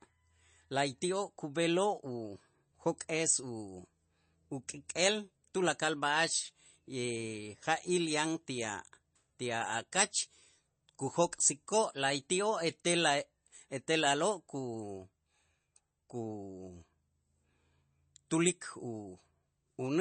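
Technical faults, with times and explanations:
Throughout, MP3 compression: an MP3 encoder starved of bits, likely running at 32 kbps, discards everything above 8.3 kHz and lets weak frequency lines flicker between frames, so the speech sounds dull and plainly watery and swirly, with metallic, smeared s sounds.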